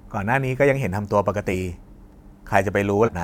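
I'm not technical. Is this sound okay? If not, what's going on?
No. The speech jumps ahead at 1.51 to 1.55 s and 3.04 to 3.09 s, losing about a fifth of a second and then most of a second. Those are compressed frames skipped.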